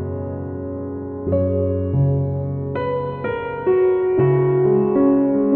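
Listening through this recording of sounds, nothing technical stood out as wrong.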